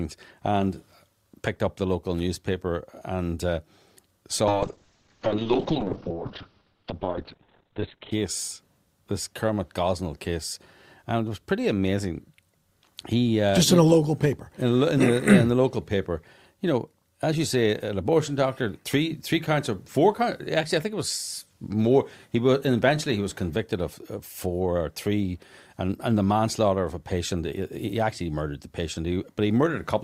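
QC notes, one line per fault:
4.48–8.18 s, call bitrate drop: the call's bandwidth estimate collapsed and the encoder was starved of bits. The coarse, watery texture points to a fall from about 48 kbps to around 8 kbps. For roughly 3.6 s, everything above 4 kHz is cut away, muffling the sound until it recovers.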